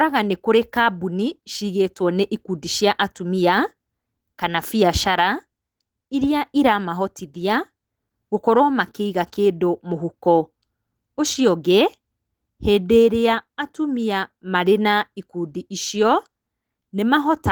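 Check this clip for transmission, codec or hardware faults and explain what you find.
Nothing faulty can be heard anywhere in the speech. There is nothing here to explain.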